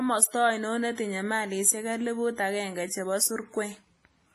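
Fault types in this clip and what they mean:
WMA compression: Transform-codec quantisation at a low bitrate, likely WMA, with a budget fitting roughly 24 kbps. Throughout the speech there is heavy ringing, washy smearing and a hiss that swells and falls with the signal, and nothing sounds above 15.2 kHz.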